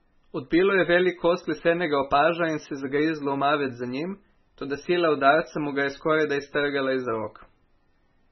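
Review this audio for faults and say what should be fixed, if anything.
Heavy MP3 compression throughout: nothing above 5.9 kHz and watery, swirling speech from weak lines flickering per frame, likely a very low bitrate near 16 kbps. Encode at a higher bitrate or keep a lossless master.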